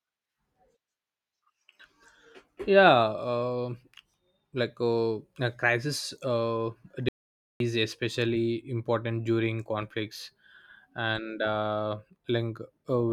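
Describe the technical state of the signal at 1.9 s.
At 1.9 s the speech signal is intact, with no dropout, clipping, glitch or other technical fault.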